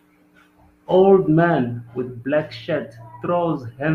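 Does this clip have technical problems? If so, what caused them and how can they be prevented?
No, nothing technical goes wrong anywhere in this speech recording, so there's no fault to explain and nothing that needs preventing.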